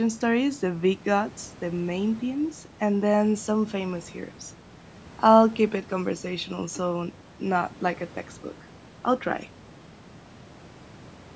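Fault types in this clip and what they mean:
Nothing here counts as a fault: the speech has simply been through a call's microphone processing, which trims the deepest bass and leaves nothing above 8 kHz, and that's just how such a path normally sounds.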